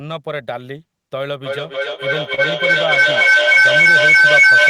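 The sender's audio clock runs slow against the receiver's, by around two percent, so the jitter buffer keeps draining. Clock drift between sender and receiver shows up throughout this speech as small, unevenly spaced timing hiccups, where short bits are repeated or briefly stretched.

From 1.45 s to the end, two devices on the call close an acoustic loop that gains level on each pass. The resulting feedback howl narrows to a tone around 1.5 kHz, with the loop repeating roughly every 0.3 s, and peaks about 13 dB above the speech.

At 2.35 to 2.40 s a packet arrives late and the jitter buffer runs dry. This short stall from a late packet makes the receiver hold the last sound for about 30 ms before resuming where it left off, so nothing is lost, but a sound is held too long.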